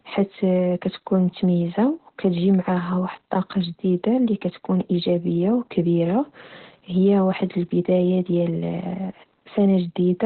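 Speech carrying Opus voice compression throughout, with heavy damage. The band stops near 4.2 kHz, and the coarsely coded excitation makes the voice hoarse and faintly robotic. That rasp separates it from a plain low-pass filter and fits narrowband SILK at about 8 kbps.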